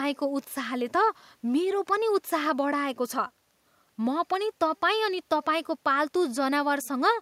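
No audible technical faults.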